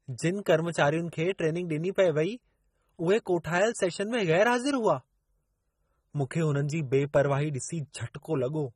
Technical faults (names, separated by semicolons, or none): AAC compression